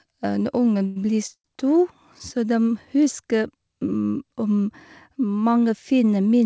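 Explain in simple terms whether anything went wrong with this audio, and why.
Two moments go wrong. At 0.86 to 0.98 s there is a short stall from a late packet: the sound is held and stretched for about a tenth of a second, then carries on with nothing lost. At 1.34 to 1.46 s there is a call audio freeze, likely from packets held up on the way. Unlike the stall, the held sound fades out to about 60 ms of silence before the speech resumes.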